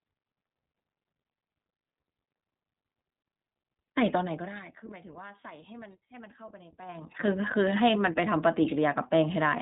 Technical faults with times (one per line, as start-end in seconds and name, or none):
0.00-9.62 iLBC codec